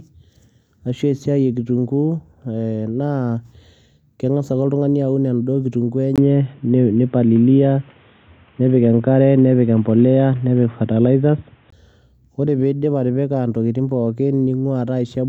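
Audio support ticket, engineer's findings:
Speech goes dull and boxy at 6.16 s, short gap of about 20 ms right at the switch, then opens back up at 11.72 s. Input switched to a poorer device, likely a headset call profile or another mic taking over. Band stops dead around 3.8 kHz, level shifts about 5 dB, and a faint new noise floor sits well under the speech. Device's own narrow path and tone explain the whole segment.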